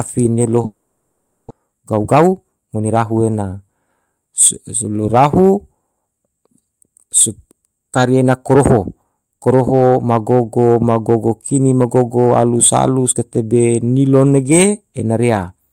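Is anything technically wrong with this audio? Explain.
Yes, there are two faults.

From 0.65 to 1.52 s the speech gives way to a buzzy, smeared continuation of the last sound that fades without reaching silence. When the speech resumes, about 600 ms of it has been skipped. The likely cause is a long network dropout: no audio arrived, and the receiver filled about 850 ms by extending the last sound.

From 1.60 to 3.18 s the speech plays at about 114% speed, sounding hurried while the pitch stays the same. This is a jitter buffer speed-up. The backlog left after the gap, roughly 200 ms, was cleared by repeatedly cutting out short pitch-period pieces.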